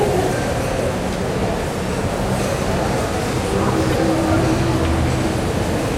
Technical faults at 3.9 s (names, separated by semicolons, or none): corrupt frame decoded